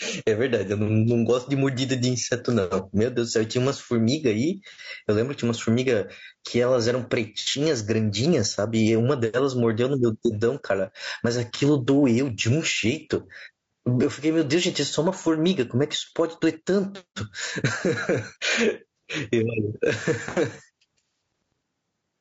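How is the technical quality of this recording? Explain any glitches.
Technically it's rough, with two problems running through the whole recording.

Gain pumping, from start to finish, with a gain swing of roughly 15 dB. The likely cause is input gain set far too high, with a fast limiter or compressor clamping down on every peak. That flattens the dynamics and leaves the speech sounding squashed.

Low-delay AAC compression, also throughout: the speech comes across rough and grainy, with a noisy fill between the harmonics and a top end that sounds dull or a bit synthetic. The damage is plainly audible. It's likely AAC-ELD, the low-delay codec used for video calls, running at a low bitrate, something around 32 kbps. At that bitrate there aren't enough bits to code the fine detail cleanly.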